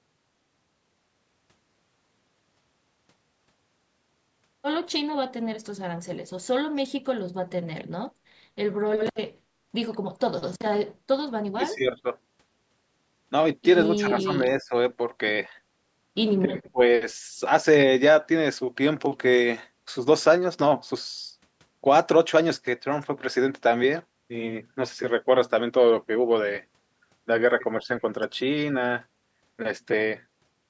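Around 11.54 to 12.04 s the voice briefly sinks, by about 20 dB at its worst over a fifth of a second or so. It dips again at 13.96 to 14.42 s and 14.62 to 14.73 s, shallower at about 10 dB. At 16.71 to 16.80 s it almost vanishes for a moment, down about 30 dB. That pattern is likely speech suppressed in double talk, where the echo canceller mistakes overlapping talk for echo and turns the near talker down.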